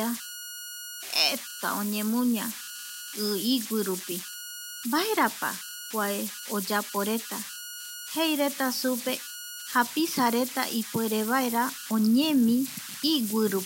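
Converter idle tones run through the whole recording. With no dither on a delta-sigma converter, low-level input lets the modulator settle into repeating bit patterns, and those cycles produce tones rather than random noise. Here the dominant tone sits around 1.5 kHz, heard as whistling, buzzy chirps or rough hiss in the pauses between phrases and as a grainy texture beneath the speech, with the error at about -11 dB relative to the signal.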